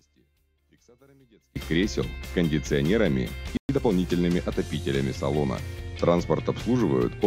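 The audio has three faults. From 0 to 1.56 s the sound is faint, down by about 34 dB, with its centre almost gone. The likely cause is one channel inverted: a stereo channel with reversed polarity cancels the shared content when both are summed to mono. At 3.57 s the sound stops dead for 120 ms, until 3.69 s. This gap points to a playback stall, likely the player running short of data or its thread being blocked. From 3.69 to 3.93 s the audio hurries at about 1.5 times normal speed, with the pitch unchanged. This is time-compressed catch-up. The player trims small slices and cross-fades them to clear the backlog built up during the stall.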